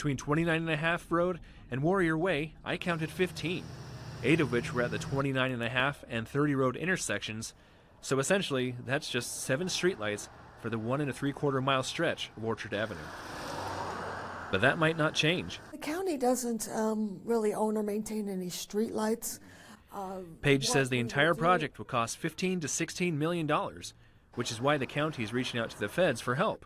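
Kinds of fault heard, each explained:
No faults heard.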